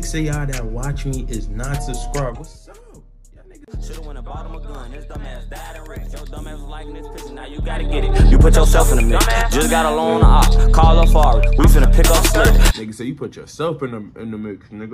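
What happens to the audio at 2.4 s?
Zipper noise runs from 2.22 to 2.6 s: the level falls by about 20 dB in unsmoothed 2 dB jumps, around thirty per second, and each jump leaves a tiny click, so a fast ticking, zipping texture rides on the sound during the drop.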